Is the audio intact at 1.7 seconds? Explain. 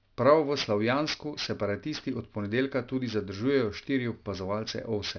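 No. At 1.7 seconds, as throughout the clip, the speech has aliasing: content above a 5.5 kHz fold, consistent with an unfiltered drop to an 11 kHz rate, has mirrored back down at roughly 15 dB below the signal, making sibilants gritty and metallic. A spectrogram shows energy running hard up to 5.5 kHz, with folded streaks.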